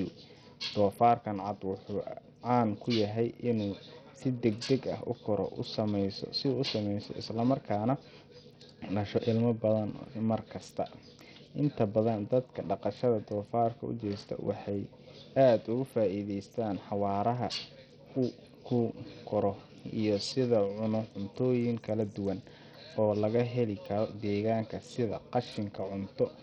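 From start to finish the speech sounds gritty and thin: the treble keeps flickering in and out, a rough hash of noise clings to every syllable, and aliasing rides on the sound. The likely cause is heavy Bluetooth SBC compression, pointing to a starved bit pool at a bitrate of around 64 kbps. SBC splits the signal into a few broad bands, starves the weak upper ones of bits and quantises the rest coarsely.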